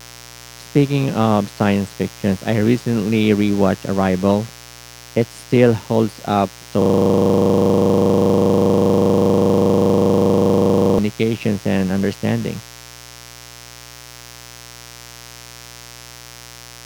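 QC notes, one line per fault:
throughout, mains buzz: sharp 60 Hz switching spikes about 20 dB below the speech give a raspy buzz; spectrogram shows stacked harmonic lines reaching several kHz.
6.82–10.99 s, system hang loop: after "still holds up so", one 40 ms piece repeats about a hundred times, a rough 25 Hz buzz; waveform shows identical tiled blocks.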